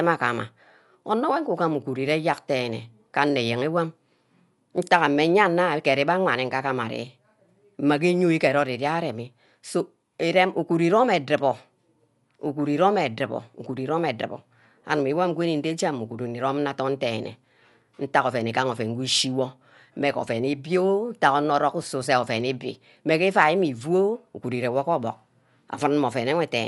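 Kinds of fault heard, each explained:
Dolby Digital compression: throughout, the speech is dull with nothing above 11.4 kHz and rough, fluttering noise around tones. This plainly audible damage likely comes from a starved encoder, consistent with about 64 kbps, narrowing the band and leaving frequency lines unfunded, which the decoder fills with dither noise.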